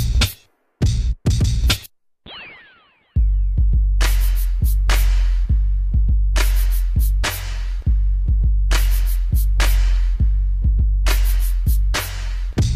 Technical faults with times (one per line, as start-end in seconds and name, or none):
none